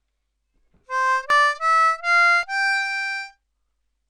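At 1.30 s and again at 2.43 s the sound jumps forward with no silence, losing roughly 70 ms and then about 20 ms. That points to a likely dropped buffer (overrun), with both sides spliced directly rather than a gap that leaves silence.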